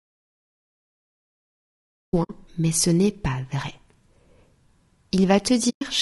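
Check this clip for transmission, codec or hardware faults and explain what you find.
Three kinds of fault are present in this speech clip: coding damage throughout, a dropout to silence at the start, and two muted frame losses.

Low-delay AAC compression affects the whole clip. The speech sounds rough and grainy. Noise fills the gaps between the harmonics, and the top band sounds thin and synthetic. The damage is plainly audible. This is likely AAC-ELD, the low-delay codec used for video calls, and the grain fits a low bitrate of about 32 kbps. Its short frames resolve pitch harmonics poorly. At that rate too few bits remain to code them cleanly.

An audio dropout to silence runs from the very start to 2.13 s. The clip opens in silence, with no room tone at all. Sound then arrives abruptly mid-flow. The input was likely lost, through a disconnected device, a failed link or a mute, while the recorder kept writing zeros. 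Anything said during this gap is gone.

AAC frame loss with muting occurs twice. The first hole runs from 2.23 to 2.31 s and lasts 60 ms, which fits three lost frames. The second runs from 5.69 to 5.82 s and lasts 120 ms, which fits six. In each case the decoder zeroed the missing spectrum. The overlapping windows fade the speech out and back in. Each gap is a soft-edged hole in the speech.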